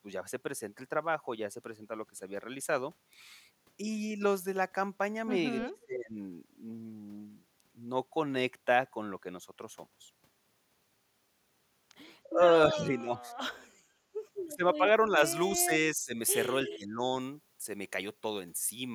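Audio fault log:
5.66–6.18 s, 12.30–12.40 s, 12.69–13.28 s, 14.47–14.82 s, 15.52–16.19 s, 16.63–17.03 s: speech suppressed in double talk. The speech dips by about 10 to 25 dB, likely because the echo canceller mistook overlapping talk for echo.
15.16–18.94 s: pre-emphasis left on. The treble sits about 11 dB high at 10 kHz relative to 1 kHz, consistent with an uncorrected 50 µs FM boost. The speech sounds thin and sibilant.
16.67–16.76 s: echo leak. A faint copy of the speech returns about 314 ms late, around 15 dB below the direct sound, likely from loudspeaker pickup that the echo canceller missed.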